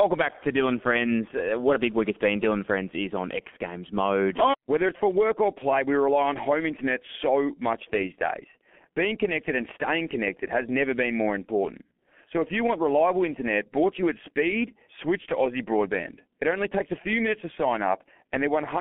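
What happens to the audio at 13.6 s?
At 13.6 s you're hearing the same G.723.1 codec damage that runs through the whole clip, nothing new starting there. The speech is squeezed into a telephone band of roughly 200 Hz to 3.4 kHz and coded at 6.3 kbit/s in 30 ms frames, so the voice model lags behind fast changes. The result here is heavy: muffled, hoarse-sounding speech with smeared, blurry consonants and no top end at all.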